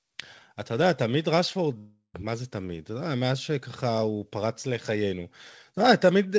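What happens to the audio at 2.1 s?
At 2.1 s the speech is inside a long network dropout running from 1.78 to 2.16 s. About 0.36 s of audio is missing, likely lost in transit. The receiver stretches the last sound into a fading buzz, ending in near silence. Speech resumes with that part gone.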